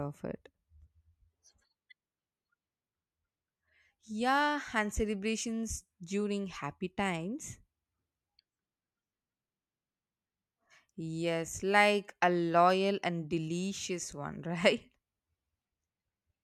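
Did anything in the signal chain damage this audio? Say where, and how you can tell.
No, nothing in the signal chain audibly damages this speech recording. No stage, from capture through to playback, leaves a mark that can be heard anywhere in the clip.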